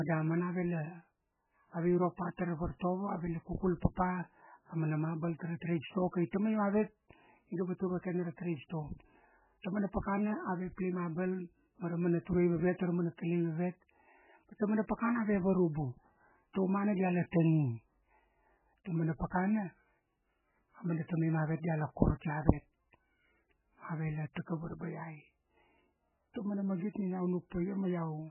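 From start to finish, the speech carries heavy codec damage, most likely from MP3 compression. There is nothing above 3 kHz. The treble has been cut away at a fixed point, so the sound is dull and boxy. Weak frequency lines drop in and out between frames, giving a watery, swirling texture. S sounds turn to metallic chirps. Consonant attacks smear. Damage this severe points to a very low bitrate, around 8 kbps.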